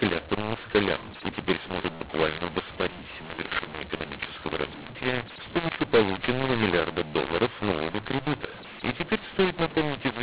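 Speech, and the whole thing sounds harsh and gritty from start to finish, with the quiet gaps between phrases filled with hiss instead of dropping to silence. That's the classic mu-law and A-law mix-up: telephone audio coded with mu-law has been decoded as A-law, so the two logarithmic curves don't match, levels get scrambled and the softest samples jump well up from zero. The band stops around 4 kHz, which fits 8 kHz G.711 telephone coding.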